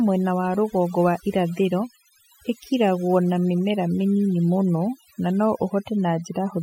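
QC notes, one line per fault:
Throughout: overdone noise removal. The noise reduction on this speech was pushed too hard, so any frequency band sitting close to the estimated noise level is pulled far down or switched off entirely. The pauses fall to near silence with small twinkling specks where isolated bands flicker on and off, and the quieter parts of the voice are removed along with the noise.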